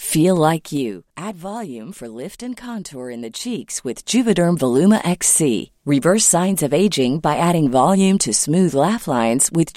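From 0.43 to 1.37 s, a gain change is applied in 2 dB steps with no smoothing between them, producing zipper noise. The speech level drops by roughly 15 dB in a staircase of about seven steps a second. Each jump leaves a small click, heard as a ticking that rides on the speech as it fades. The same fault returns from 3.14 to 4.35 s, stepping the level back up by around 15 dB with a slower tick of about five a second.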